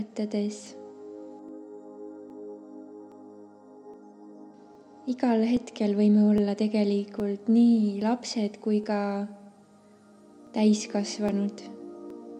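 Clock drift buffer slips, 0.67 to 12.10 s: regular clicks every 0.82 s, likely mismatched device clocks forcing small sample blocks to drop or repeat.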